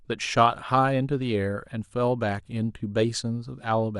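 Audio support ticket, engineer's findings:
DAB burbling, 2.45 to 2.52 s. Burbling over speech for about 70 ms. Probable cause: weak DAB reception, residual bit errors (around a tenth of a percent) past error correction, corrupting MP2 samples into noise blips in single sub-bands, and scale factors so sub-bands jump in level for up to a frame.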